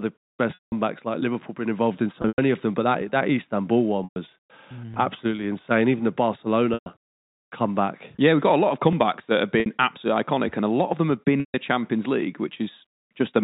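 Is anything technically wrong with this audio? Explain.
Yes, the speech has dropouts from packet loss with pitch repetition at 0.54 s (180 ms lost), 2.22 s (120 ms scattered over 160 ms), 4.04 s, 6.74 s (120 ms each), 9.60 s (60 ms) and 11.40 s (140 ms). The receiver fills each loss by repeating the last pitch period, which gives a held, buzzy tone fading over about 50 ms into silence. The speech then cross-fades back in. The telephone-band G.711 coding underneath carries the speech normally.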